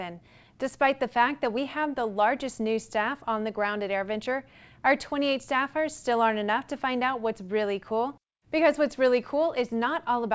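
Nothing stood out on listening; the sound simply carries the expected band limit of a G.722 call path, with nothing above 8 kHz.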